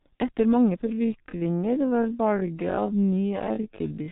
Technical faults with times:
0.00-4.12 G.723.1 codec
0.82-4.12 time-stretched section

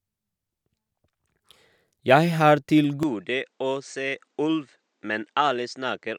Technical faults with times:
3.03-6.18 input switched to a poorer device

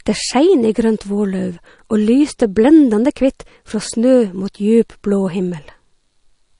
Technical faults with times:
0.00-6.59 MP3 compression

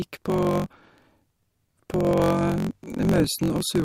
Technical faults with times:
0.00-3.84 block size mismatch (truncated)

